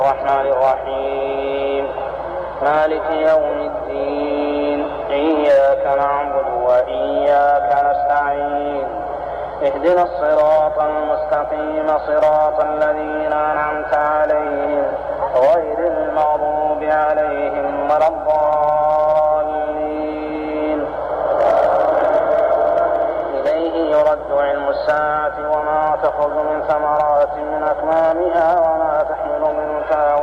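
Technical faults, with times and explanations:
No technical faults can be heard anywhere in this audio. Nothing in the signal calls for a time or an explanation.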